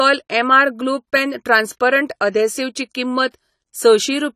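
From start to finish the speech carries AAC compression damage, likely from low-bitrate AAC-LC coding at around 32 kbps. Nothing survives above 14 kHz, so a spectrogram shows a flat ceiling there with patchy holes below. Sibilants come out fizzy and smeared, and vowels sound dull and warbling.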